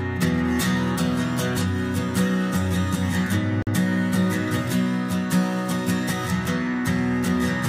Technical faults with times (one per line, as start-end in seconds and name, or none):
3.62-3.67 gap between stream segments